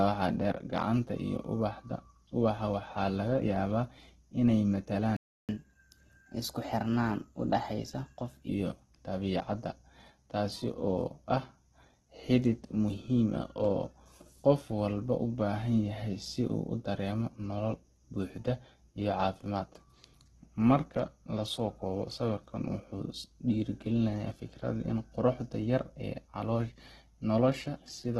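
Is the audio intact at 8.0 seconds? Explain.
No. At 8.0 s the sound is inside a catch-up at higher speed that runs from 5.49 to 8.49 s, ending just before "dabiicadda taas". After a stall the player resamples its backlog at 1.1 times normal speed, so pace and pitch rise together by roughly a semitone and a half. Unlike a pitch-shift fault, both return to normal once the lost time is recovered.

Throughout, including this moment, the sound is rough and grainy with its bandwidth narrowed to super-wideband, which points to heavy damage from a low bitrate around 12 kbps. The likely cause is Opus compression in its music mode. It fills starved bands with noise instead of leaving gaps, so it turns coarse rather than swirling like MP3.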